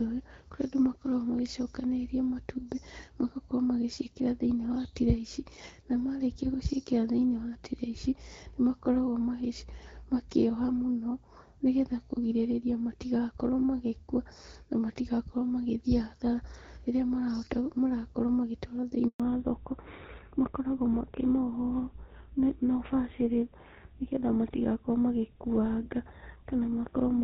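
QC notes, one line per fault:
19.08 to 19.20 s, handover gap: speech cuts out for 120 ms as the call switches networks; no frames arrive, so the audio goes silent until the new link starts.
19.20 s to end, fallback to narrowband: after the handover, content above 4 kHz is gone; the call has dropped from HD Voice to a GSM full-rate narrowband codec, so speech sounds duller and rougher.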